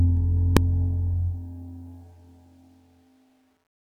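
At 0.57 s there is a single sharp bang. This is a case of invalid numbers at full scale. A calculation went wrong and produced infinite or invalid values. These were forced to the largest value the signal can hold. The output then sat pinned at one extreme value for about 1.45 ms, which fits a 64-sample processing block. That span is too short to hear a start pop, an end pop and silence between. They merge into one loud crack.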